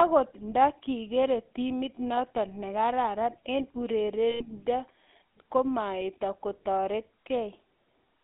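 From start to end the speech carries GSM full-rate codec damage, which points to the 13 kbps GSM codec. Its pulse-driven vocal-tract model leaves a plainly audible buzzy, gravelly roughness. A spectrogram shows energy confined to roughly 200 Hz to 3.6 kHz, with coarse harmonic smearing.

From 4.3 to 4.44 s, lost GSM frames leave the decoder repeating the last good frame's settings. The result is a rough, metallic ring lasting about 100 ms, which fits five lost 20 ms frames. On the waveform it appears as a repetitive block. On the spectrogram it appears as frozen horizontal bands.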